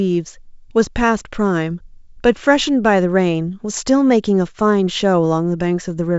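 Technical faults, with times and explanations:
Nothing faulty is heard in this speech recording.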